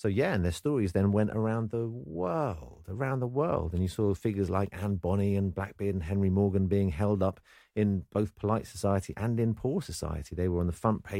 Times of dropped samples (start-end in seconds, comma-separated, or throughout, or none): none